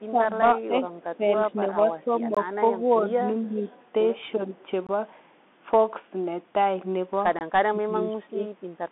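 Running under the whole thing is the Bluetooth CVSD headset codec. Nothing gets through above 3.8 kHz, and the line band sits roughly between 200 Hz and 3.5 kHz, so the speech is boxed in and dull. CVSD sends one bit per sample saying up or down, with an adapting step. When the signal moves faster than the step can follow, the sound distorts. That shows up as scratchy sibilants, and a steady granular hiss sits underneath, consistent with a 64 kbps CVSD link.

From 0.07 to 3.19 s the speech keeps dipping and getting chewed away, about 1.5 s of it in total, with the deepest drops around 15 dB. This is likely speech suppressed in double talk: the echo canceller couldn't tell the talker from the far end's audio coming back and ducked both.

Right in the middle of that, at 2.35 to 2.37 s, there's a gap between chunks: a hard-edged hole of about 21 ms. It comes back at 4.87 to 4.89 s and 7.39 to 7.41 s, spaced about 2.5 s apart. 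That spacing points to audio handled in 2.5 s blocks with a bit of dead air left at each join. No audio is actually lost, but you hear a clean little dropout each time.

From 3.45 to 3.83 s there's an echo leak. A very faint copy of the voice trails about 384 ms behind, likely from a speakerphone whose canceller let some of its mic pickup slip back into the call.

Double-talk suppression comes back three more times. The first is short and shallow, about 5 dB over roughly 150 ms between 3.53 and 3.67 s, overlapping the echo. The second is another mild dip between 4.36 and 4.57 s. The last is the worst, from 7.66 to 8.49 s, where the speech sinks by around 25 dB for about 0.7 s and nearly vanishes in places.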